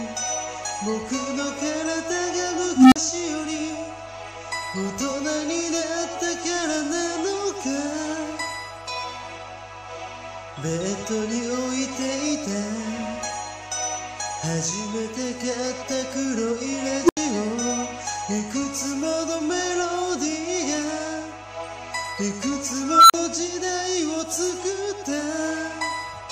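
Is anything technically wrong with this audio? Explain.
Yes, there are two problems: a constant hum and three bursts from an unstable filter.

Mains hum runs through the whole clip as a steady 50 Hz tone, roughly 25 dB below the wanted signal. Power-line current is leaking into the signal path, probably through a ground loop or from a transformer close to the cabling. The result is a low, unchanging drone beneath the audio that stays put whatever else is happening.

Unstable filter faults occur from 2.76 to 2.96 s, 17.04 to 17.17 s, and 22.84 to 23.14 s. A recursive filter with bad coefficients feeds its output back on itself and grows until it clips, then overflows and goes silent until it resets. Each event is a rising tone: around 300 Hz over 157 ms and then 40 ms of silence, around 300 Hz over 54 ms and then 80 ms of silence, and around 1.5 kHz over 258 ms and then 40 ms of silence.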